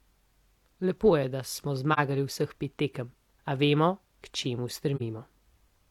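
Two brief soft-edged dropouts interrupt the speech, at 1.93 to 1.99 s and 4.96 to 5.02 s. Each is AAC frame loss with muting: about 43 ms of audio, which fits a single lost frame, was zeroed by the decoder, and overlapping windows fade the sound out and back.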